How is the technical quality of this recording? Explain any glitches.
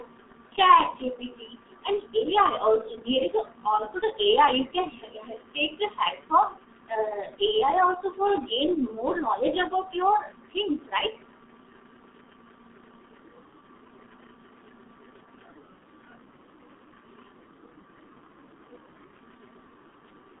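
Technical quality is poor. Throughout, the speech sounds muffled, hoarse and smeared, with blurred consonants. That is the signature of the G.723.1 codec: a narrow 150 Hz to 3.7 kHz line band, nothing above 3.8 kHz, and a very low data rate (the heavy damage fits about 6 kbit/s) that updates its voice model only once per 30 ms frame.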